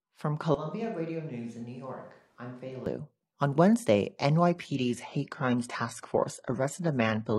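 From 0.55 s to 2.86 s the speech turns abruptly roomy and hollow, loses low-end weight and drops by about 10 dB, with room noise rising to roughly 35 dB below the speech. The return to the close, full sound at 2.86 s is just as sudden. This is likely a switch to a distant microphone, with the close microphone's feed dropping out and a far-off pickup carrying the signal for that stretch.

At 4.49 s the quality falls without any gap, and the lower grade holds to the end of the clip. This is an adaptive stream at a lower bitrate, with the player moving to a cheaper encoding after the connection slowed. The top end loses its natural detail and takes on a synthetic, swirly quality, and coding artefacts rise. The change is consistent with a move from AAC-LC at around 96 kbit/s to HE-AAC at around 16 kbit/s, where the treble is rebuilt rather than coded directly.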